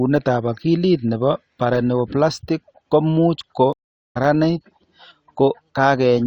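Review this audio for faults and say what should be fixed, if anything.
A stream reconnect at 3.73–4.17 s, after "paraneoplastic ko much ko": the connection dropped, leaving about 0.43 s of silence, then a fresh decoder resumed the speech roughly a third of a second later. Prevent it with a larger network buffer and automatic resume from the last received position.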